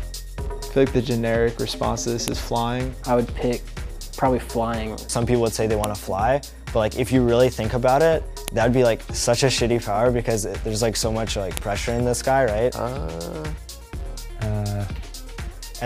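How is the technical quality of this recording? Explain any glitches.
The recording has one recurring glitch, a file header played as audio, at 2.28, 5.84, 8.48 and 11.57 s. Each is a sharp snap where header bytes play as samples, unlike dropout clicks, which leave gaps.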